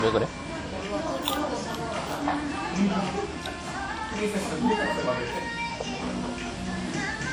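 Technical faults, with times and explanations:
Throughout: low-bitrate audio saved at a high bitrate. The sound carries the losses of a coarse first encoding, likely a 48 kbit/s WMA stage, later wrapped in high-rate MP3. That second pass cannot restore discarded detail, so those artefacts persist, with nothing above 20.1 kHz.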